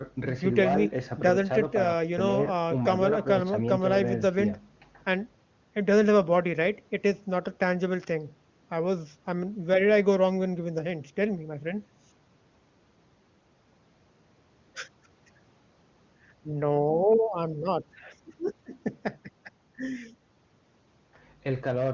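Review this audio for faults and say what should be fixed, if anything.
Nothing needs fixing: the speech shows the expected band limit of call microphone processing with no content above 8 kHz, and the AMR wideband (HD Voice) coding sounds clear, with at most faint coding texture, which fits one of its higher rates near 23.85 kbit/s.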